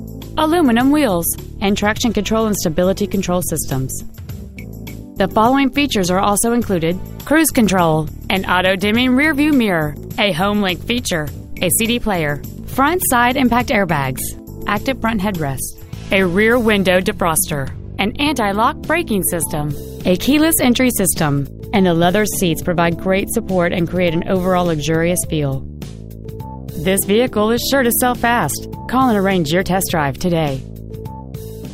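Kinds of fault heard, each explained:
No faults heard.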